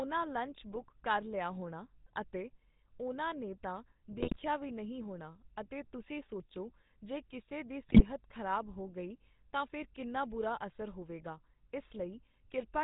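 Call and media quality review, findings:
Buzzy, gravelly roughness on all speech, nothing above 4 kHz. GSM full-rate codec, sound consistent with 13 kbps: pulse-train excitation keeps only every third sample, so damage is plainly audible.

Squawks and gargling at 0.72–0.83 s before "ਕਰ ਲਿਆ ਹੋਣਾ ਅਤੇ", 4.12–4.37 s after "ਅਤੇ ਉਹਨਾਂ ਨੇ ਤਾਂ", and 7.88–8.04 s after "ਸੋਚੋ ਜੇ ਕਿਸੇ ਦੀ". GSM bit errors, roughly 1.5–2.3% error rate, corrupting filter, pitch and gain values per frame.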